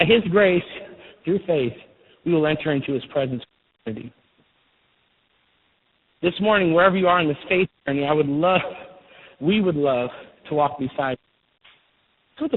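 Tandem speech coding runs through the whole recording. The speech sounds rough, muffled and warbly, with nothing above 3.8 kHz. This fits a call passing through three speech codecs in a row, with the last stage sounding like G.726, and being decoded and re-encoded at each link boundary. Each coder works on the previous one's already damaged output, so the artefacts stack up beyond what any single codec would produce.

A wireless microphone squelch dropout occurs from 3.35 to 3.94 s, right after "will enter into his". Hiss rises briefly, then the audio falls into near silence for about 0.43 s before the speech returns. The analogue FM radio link faded so far that the receiver's squelch muted its output.

A second wireless microphone squelch dropout follows from 10.93 to 11.84 s, after "would love to walk". It has the same pattern: a short burst of rising static, then a muted gap of about 0.51 s while the signal stays below the squelch threshold.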